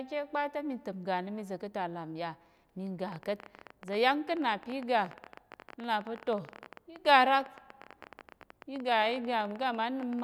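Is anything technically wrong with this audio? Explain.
Yes. From 3.08 s to 10.21 s, a train of clicks ticks over the speech and through its pauses at about 17 per second, unevenly spaced, around a hundred in all, with peaks near 5 dB above the speech. The likely cause is interference from nearby equipment or a faulty connection or power supply injecting short pulses.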